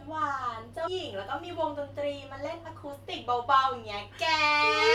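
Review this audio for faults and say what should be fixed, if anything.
Compressed frames skipped at 0.86 s: the audio jumps ahead about 150 ms, which fits roughly seven 23.2 ms frames lost. To prevent this, verify file integrity after encoding and transfer, and re-encode or re-fetch any stream with missing or corrupted frames.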